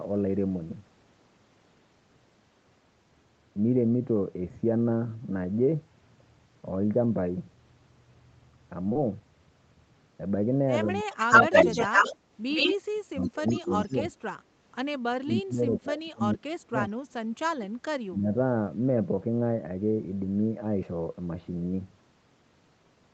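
At 8.89 and again at 8.93 s, two back-to-back stretches of short concealed packet loss, about 20 ms each, leave a brief smear where the decoder stretched the preceding sound to cover audio that never arrived. Unlike a hard dropout, there is no silent gap, only a momentary blur.

From 10.85 to 11.54 s the speech dips by about 20 dB, then briefly and mildly at 11.89 s. From 12.89 to 13.99 s and 15.00 to 16.93 s it drops further, falling by about 35 dB, and a shorter dip follows at 18.07 to 18.29 s. This is likely speech suppressed in double talk: an echo canceller turned the talker down while the far side spoke.

Overlapping this, from 11.12 to 12.17 s, 12.51 to 12.75 s and 13.23 to 13.95 s, a copy of the sound returns 110 ms late. This is likely echo leak from a loudspeaker that the canceller failed to remove. At first it is clearly louder than the direct sound, briefly about as loud, then quieter. 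The fixed delay sets it apart from reverberation.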